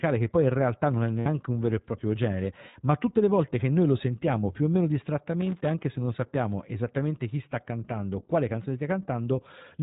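iLBC codec damage runs through the whole speech clip: nothing above 4 kHz survives, and the voice has a rough, slightly synthetic edge. Each short frame is coded on its own, and the sound fits iLBC's 20 ms mode at about 15 kbps.

Lost iLBC frames occur at 1.20 to 1.27 s, between "in realtà non è" and "un vero e proprio", and again at 2.70 to 2.76 s, between "vero e proprio genere" and "ma tutte le volte". These gaps of 60 ms and 40 ms fit three and two dropped 20 ms frames. The decoder fills each gap by repeating the last pitch cycle mixed with noise, which sounds like a brief held, buzzy vowel. The voice returns to normal immediately afterwards.

Loose connector crackle runs from 5.41 to 5.81 s, between "sentiamo più o meno" and "se non sappiamo esattamente". A worn or dirty contact is rapidly making and breaking, chopping the signal into an irregular burst of scratchy crackle.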